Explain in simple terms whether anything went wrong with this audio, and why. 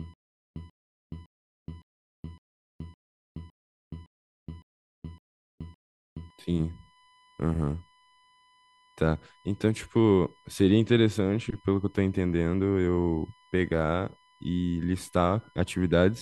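Two things went wrong. From the very start until about 6.3 s, the speech suffers a stutter with silent gaps. A short 137 ms burst of sound repeats every 0.56 s, with about 0.42 s of dead silence between repeats. The audio that belonged in those gaps is gone, most likely because the player or stream stalled and kept replaying its last fragment.

Throughout the whole clip there is also a USB whine, a faint but steady 1 kHz tone sitting under the speech. It comes from the USB connection's regular once-per-millisecond activity leaking into the audio through the power or ground wiring.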